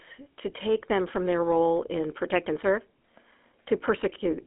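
A buzzy, gravelly roughness runs through the whole of the speech, with a hollow, boxed-in tone and no air or sparkle at the top: nothing sounds above about 3.8 kHz, and the low end is thin below roughly 250 Hz. That is the GSM full-rate codec. It rebuilds the voice from a vocal-tract model excited by evenly spaced pulses, keeping only a third of the excitation detail, which fits a 13 kbps mobile link.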